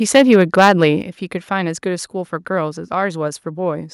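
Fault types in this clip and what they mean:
microphone overload: From 0.15 to 0.84 s the loudest speech peaks are flattened against the converter's ceiling, which gives the syllables a harsh, crackling edge. The input is driven roughly 6 dB past full scale, and a small share of the waveform, around 3 percent, is cut off at the top. The likely cause is a microphone input volume set too high for this talker's level, so the peaks run out of headroom before conversion.
microphone volume stepped down: At about 1.02 s the whole signal drops in level in a single step, with speech and background falling together by about 7 dB. The drop comes shortly after the distorted peaks end, and it does not fade in gradually the way a compressor or gain ride would. This is likely the call software's automatic gain control reacting to the clipped input by cutting the device's input volume in one move.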